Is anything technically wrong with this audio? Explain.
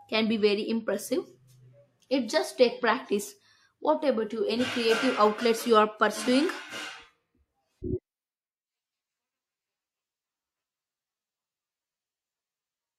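No, nothing technically wrong stood out on listening to this speech recording.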